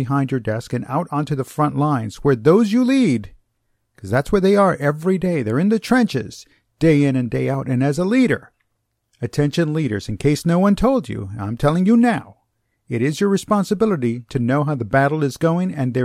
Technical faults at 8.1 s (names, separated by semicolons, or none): none